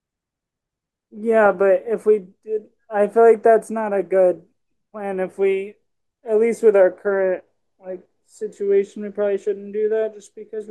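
No technical faults can be heard anywhere in this speech recording; the signal stays continuous and steady throughout.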